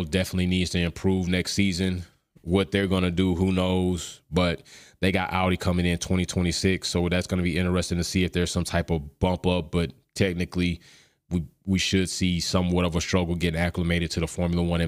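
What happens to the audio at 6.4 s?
Nothing goes wrong at 6.4 s; the speech continues intact through that moment, with no dropout, click or distortion.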